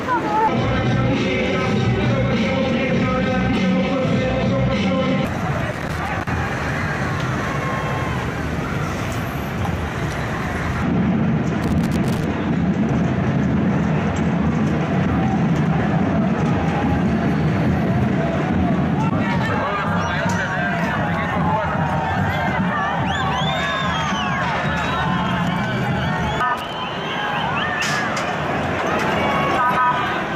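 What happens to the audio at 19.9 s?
Nothing goes wrong at 19.9 s; the audio plays through that point intact, with no dropout, click or other fault.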